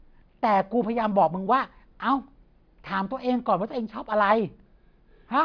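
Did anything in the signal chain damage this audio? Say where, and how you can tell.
No, nothing in the signal chain audibly damaged this speech recording. No stage between capture and playback leaves a mark that can be heard anywhere in it.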